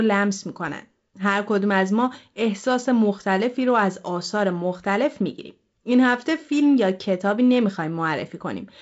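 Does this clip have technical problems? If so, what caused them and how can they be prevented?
No, nothing stood out as a technical problem on listening to this speech clip, so there is nothing here to trace to a cause or to prevent.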